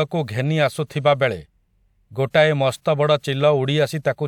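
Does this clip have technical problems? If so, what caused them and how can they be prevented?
No, nothing in this recording points to a technical fault, so there is no cause to trace and nothing to prevent.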